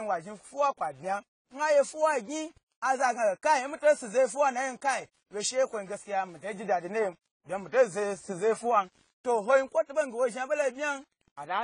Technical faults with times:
0.00-11.63 low bit depth without dither
0.00-11.63 AAC compression

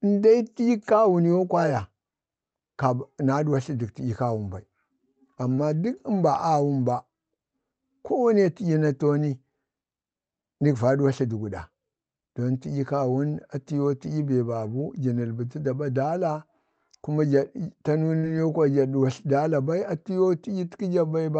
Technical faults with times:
5.54-5.58 short concealed packet loss
18.18-18.24 short concealed packet loss

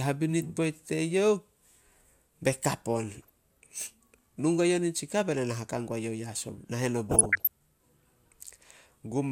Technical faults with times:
3.21-3.30 DAB burbling
7.09-7.47 DAB burbling

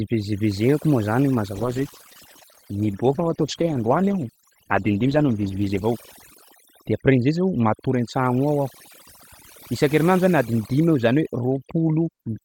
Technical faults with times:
0.00-12.44 overdone noise removal
1.57-5.91 call bitrate drop

